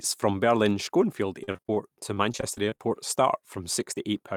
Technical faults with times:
1.43-1.78 repeated packet loss (robotic sound)
2.14-2.80 repeated packet loss (robotic sound)

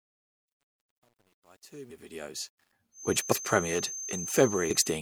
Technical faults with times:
0.00-2.73 truncation distortion on a fade
1.90 compressed frames skipped
2.91-5.01 feedback whistle
3.31 compressed frames skipped
4.69 compressed frames skipped

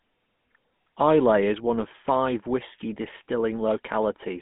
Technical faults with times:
0.00-4.41 GSM full-rate codec

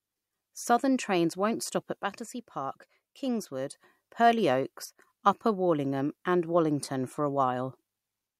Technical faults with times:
2.03-3.73 one channel drops out
4.85-4.98 one channel drops out

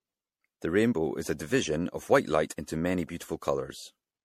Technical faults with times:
0.00-4.24 generation loss

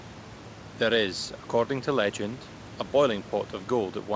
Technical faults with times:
none

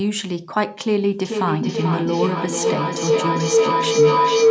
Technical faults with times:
1.25-4.51 feedback howl

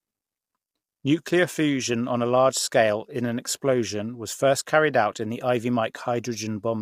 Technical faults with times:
0.00-6.82 low-delay AAC compression

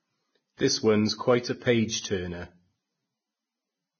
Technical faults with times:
0.00-4.00 Vorbis compression

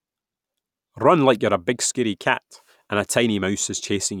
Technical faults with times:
none

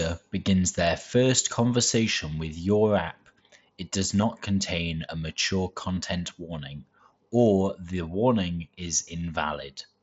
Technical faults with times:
4.21 concealed Bluetooth headset packet loss
5.96 concealed Bluetooth headset packet loss

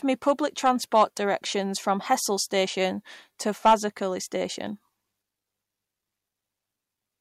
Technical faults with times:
0.28-0.31 hard clipping
0.66-1.03 hard clipping
3.66-3.74 hard clipping

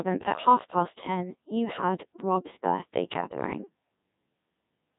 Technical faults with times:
0.00-4.99 Codec 2 vocoder
3.17-3.46 bit errors on digital voice radio

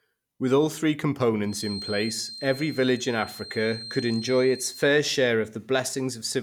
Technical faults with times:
1.43-4.95 feedback whistle

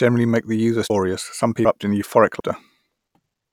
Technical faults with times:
0.90 audio missing between chunks
1.65 audio missing between chunks
2.40 audio missing between chunks
3.15 audio missing between chunks

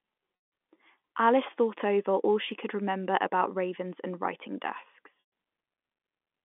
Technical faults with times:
0.36-0.52 packet loss with pitch repetition
2.52 dropped samples
5.20-5.29 packet loss with pitch repetition

